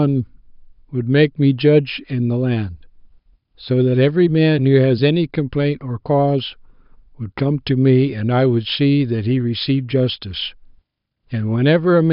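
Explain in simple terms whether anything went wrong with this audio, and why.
Listening to the recording, nothing went wrong with the audio that a listener would notice.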